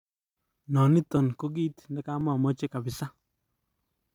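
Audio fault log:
0.13–3.25 s, clock drift buffer slips: a short click recurs about every 1.04 s, roughly four times, during the speech. This is likely two devices whose clocks disagree by several hundred parts per million, so their shared buffer periodically drops or repeats a few dozen samples.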